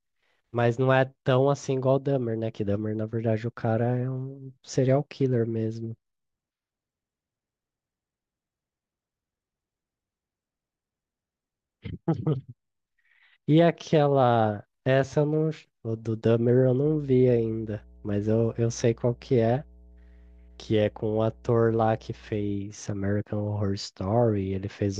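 A ground loop or a nearby transformer lets the 60 Hz power line couple into the signal path between 16.86 and 22.57 s, producing mains hum. For those five or six seconds a steady low drone sits beneath the speech, pitched at 60 Hz with some low harmonics above it. It runs roughly 25 dB under the speech, and it stops at 22.57 s.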